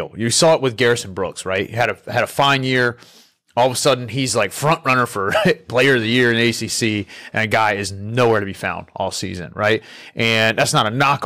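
Hard clipping runs through the whole speech clip, from start to finish. The signal reaches a stage about 7 dB hotter than it can pass, so every peak that crosses the limit is sliced flat, with only a small fraction of samples, around one or two percent, affected. Those squared-off tops generate harmonics high in the spectrum, heard as a gritty crackle that flares on the loudest syllables and leaves the quieter stretches between them comparatively clean.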